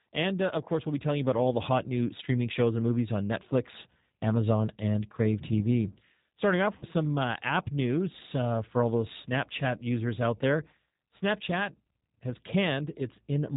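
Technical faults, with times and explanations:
throughout G.729 codec: The speech has a rough, slightly synthetic quality with nothing above 4 kHz, consistent with an 8 kbit/s G.729 coder. It rebuilds each 10 ms frame from a vocal tract filter, a pitch predictor and a few pulses, so fine detail is lost.
6.78 to 6.84 s VoIP packet loss concealed by the speech codec: About 40 ms of audio went missing, which fits two lost 20 ms packets. The decoder extended its last pitch and filter at falling gain, leaving a brief buzzy or noisy, fading smear. Because each frame builds on the previous one, the speech just afterwards sounds weak or distorted.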